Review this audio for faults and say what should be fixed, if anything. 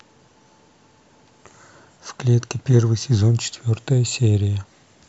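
Nothing stood out on listening to this speech recording, so there is nothing here that needs to be fixed.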